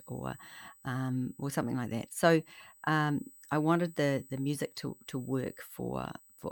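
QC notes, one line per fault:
Throughout, USB whine: current drawn by the USB bus in 125-microsecond microframes leaks through power or ground into the audio path, adding a steady fixed-pitch whine at 8 kHz, strongest at its 16 kHz multiple, sitting roughly 25 dB below the speech.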